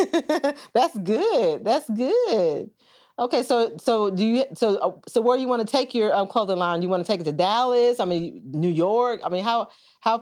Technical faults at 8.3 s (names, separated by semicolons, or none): none